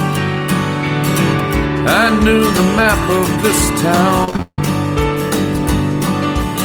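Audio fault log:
4.24–4.59 s, repeated packet loss (robotic sound): Seven holes hit this short stretch, the longest 158 ms. Each is patched by stretching the last sound, so about three quarters of the span is filler. The result is choppy, with pieces missing.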